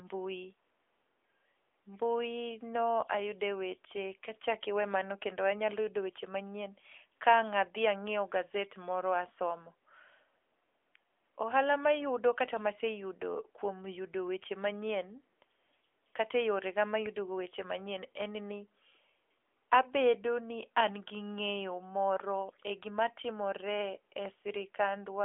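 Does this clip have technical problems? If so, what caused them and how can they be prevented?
Yes. AMR narrowband mobile codec damage runs throughout: the speech is confined to a telephone band of roughly 300 Hz to 3.4 kHz with nothing above 3.5 kHz, and the vocal-tract model's plainly audible buzzy, synthetic texture fits a middling AMR-NB rate near 10.2 kbps. Record locally or use a wideband path instead of routing the audio through a narrowband mobile call.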